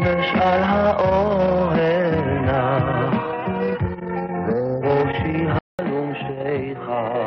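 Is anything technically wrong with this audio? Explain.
Yes. An input switch to a poorer device at 5.59 s: after about 200 ms of silence, the sound turns dull, losing everything above 4.3 kHz, drops a few decibels, and gains faint new background noise, likely from a narrower-band microphone or headset profile.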